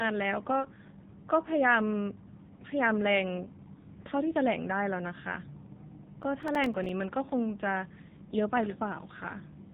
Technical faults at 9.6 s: AMR narrowband mobile codec

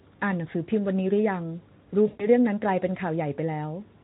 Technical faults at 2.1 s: VoIP packet loss concealed by the speech codec

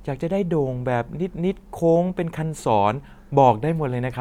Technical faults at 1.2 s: none

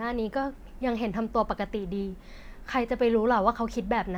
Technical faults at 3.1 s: none

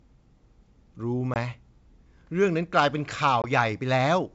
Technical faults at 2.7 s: none

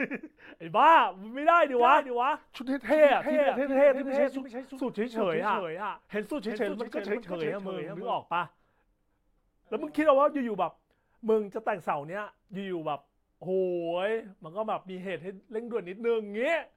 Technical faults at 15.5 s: none

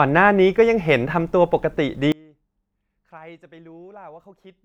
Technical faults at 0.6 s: none

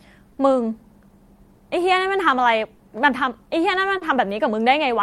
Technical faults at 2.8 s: clock drift between sender and receiver; short stall from a late packet

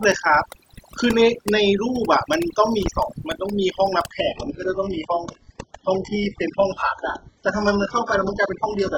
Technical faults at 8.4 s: overdone noise removal; adaptive stream at a lower bitrate

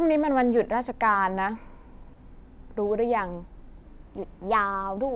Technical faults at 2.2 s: short concealed packet loss

